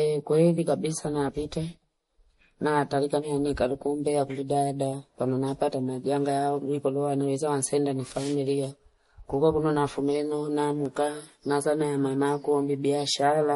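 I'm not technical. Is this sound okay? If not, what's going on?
No, it's not quite clean. The whole recording has a plainly audible watery, swirly edge, and the crisp top end is missing, with nothing above about 11.2 kHz. That's most likely MP3 compression squeezed a bit too hard, trimming detail to save space.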